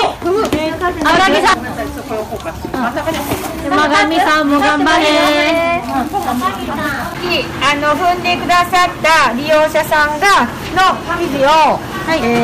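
Hard clipping runs the whole way through: the signal's driven about 16 dB too hot, so around a tenth of samples get sliced flat, giving harsh fuzz.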